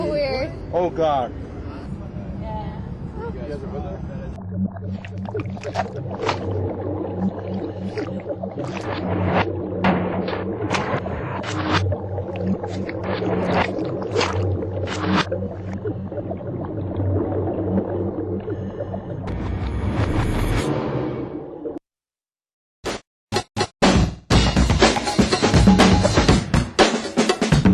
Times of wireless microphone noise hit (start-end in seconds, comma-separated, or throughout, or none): none